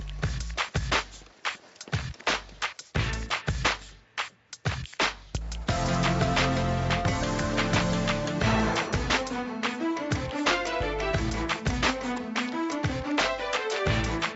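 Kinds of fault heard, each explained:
Nothing stood out on listening, beyond the top end stopping at about 8 kHz as expected from the call's microphone processing and codec.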